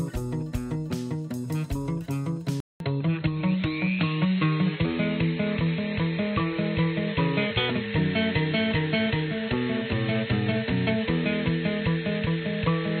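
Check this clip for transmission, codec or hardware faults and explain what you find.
One fault is present. At 2.6 s the sound drops out for about 200 ms, then returns duller and boxier for the rest of the clip, with nothing above 4.2 kHz, a level shift of about 5 dB, and a new background noise floor roughly 50 dB below the signal. This is likely an input switched to a poorer device. The system changed to a narrower-band microphone or headset call profile, which brings its own tone, level and noise.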